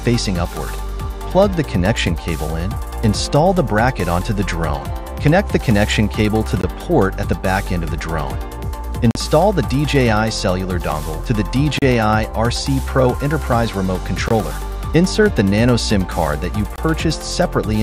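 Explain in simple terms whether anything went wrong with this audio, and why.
Five blocks of digital silence occur, at 6.61, 9.11, 11.79, 14.28 and 16.76 seconds. Each is a brief hole of 21 to 43 ms. The audio cut out abruptly, which fits a playback buffer not being filled in time.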